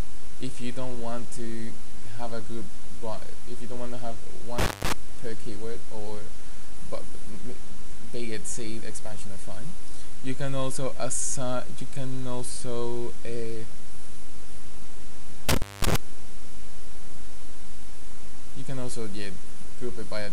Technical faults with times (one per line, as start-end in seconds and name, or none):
4.58-4.93 intermittent contact
15.49-15.96 intermittent contact